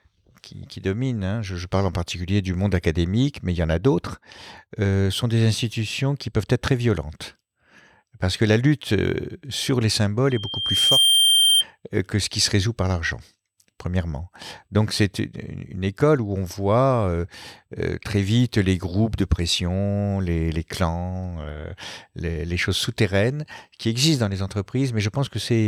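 Loudspeaker feedback squeal, 10.30 to 11.64 s, after "la lutte sur les": the microphone re-amplifies its own loudspeaker, so a 3.2 kHz tone swells within a second above the speech.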